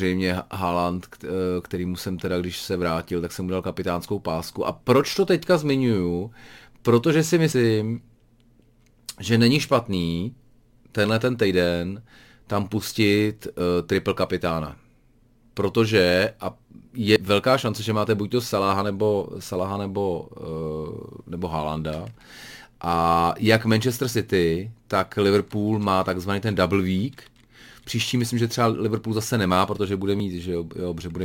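Dropped buffers (overrun) break this speech clip at 7.52, 13.6, 17.16 and 30.2 s, each with the sound jumping forward, losing roughly 70 ms at the first and about 40 ms at the others. The likely cause is samples being overwritten before capture collected them.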